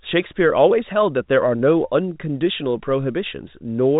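Nothing's wrong with this one: it's just speech coming through what sounds like an ordinary telephone line, capped at 4 kHz as phone audio normally is, with no faults to point to.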